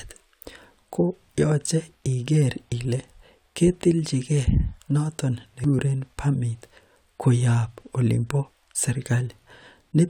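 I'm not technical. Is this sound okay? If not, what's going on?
No. At 5.64 s there's a CD skip: a tiny tick, then the speech jumps to another spot. Unlike a brief dropout, it doesn't pick up where it stopped.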